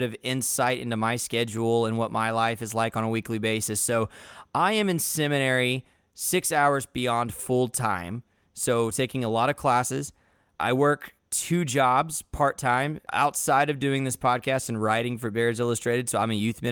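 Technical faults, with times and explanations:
Nothing to flag here, as the speech runs along without a single technical hitch anywhere in the recording.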